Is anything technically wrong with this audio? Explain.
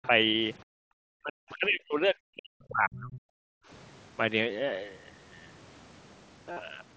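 Yes, there are four kinds of fault in this speech recording.

Other side's voice leaking through, 0.03 to 0.07 s: a faint scrap of a second voice, around 25 dB below the talker, appears right at the start. It is likely loudspeaker playback that the echo canceller failed to fully remove from the microphone signal.

Background gated by the echo canceller, 0.64 to 0.90 s and 3.45 to 3.69 s: the room tone collapses by up to about 40 dB for a fraction of a second each time. The canceller clamped the microphone while the far end played, then released it.

Speech suppressed in double talk, 1.18 to 3.17 s: for about two seconds the talker's voice drops very deeply. The likely cause is the canceller, unable to separate near speech from loudspeaker echo while both sides talked, turning everything down together.

Concealed Bluetooth headset packet loss, 6.52 to 6.57 s: a 45 ms gap, which points to about six consecutive lost frames on the headset link, was filled by repeating the recent waveform. 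It sounds like a brief buzzy, held tone with a slight warble as real audio resumes.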